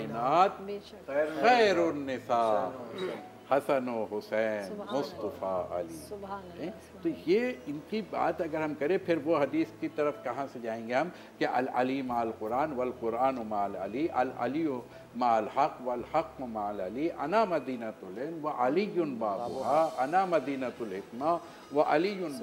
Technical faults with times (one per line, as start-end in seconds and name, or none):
none